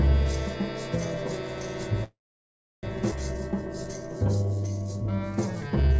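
A call audio freeze runs from 2.04 to 2.85 s. The sound stops and the receiver carries the last moment on as a fading fill before about 0.67 s of silence, likely because packets stalled in transit and the jitter buffer ran dry. When playback resumes, it continues from where it stopped, so about 0.79 s of gap has been inserted and nothing is lost.

A skip ahead follows at 3.11 to 3.14 s. With later audio already queued, roughly half a second of material was discarded, either in transit or by an overfull jitter buffer. The two sides are butted together with only a few milliseconds of fill, so playback jumps abruptly forward.

Jitter buffer slow-down appears twice: 3.34 to 5.17 s, adding 212 ms at 89% speed, and 5.67 to 5.94 s, adding 50 ms at 85% speed. Short pitch periods or pause fragments were repeated to rebuild the buffer reserve, so the sound drags at unchanged pitch. Throughout, nothing reaches above 8 kHz, which fits G.722 at 64 kbps.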